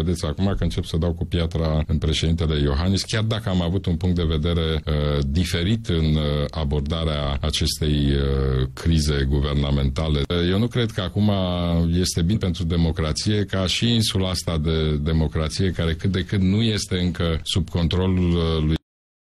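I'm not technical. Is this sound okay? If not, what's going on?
No, there are two problems.

At 12.31 s there are compressed frames skipped. Compressed audio is stored in small blocks called frames, here about 46 ms each. A couple of those blocks never got played. They were either missing from the file or too damaged for the player to use. So the sound jumps ahead by about a tenth of a second.

At 18.76 s there is a cut-off end. The sound stops suddenly in the middle, instead of fading away naturally. The last pieces of audio were never written or played. After that point there is only dead silence, with no tail at all. It feels as if someone pulled the plug. Nothing that should have followed is there.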